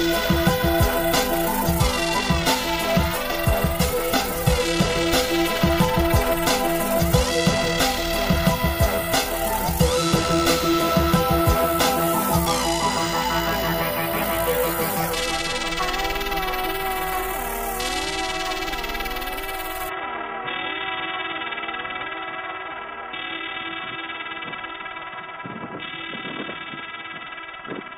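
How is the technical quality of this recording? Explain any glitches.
The recording is clean up to 19.89 s, then the sound turns dull and boxy to the end, which is most likely the input switching to a poorer device, such as a second microphone or a headset's call profile. From that point nothing is heard above about 3.8 kHz, and a faint new background noise appears well below the signal. The switch itself is seamless, with no gap and roughly unchanged loudness. That new noise floor, with its different character, separates a device change from a simple low-pass filter or codec bandwidth drop.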